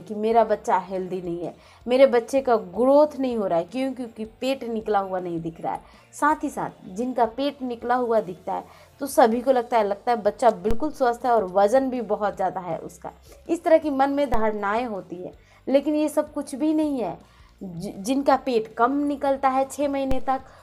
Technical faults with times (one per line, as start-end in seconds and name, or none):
10.71 DC step
14.34 DC step
20.11 DC step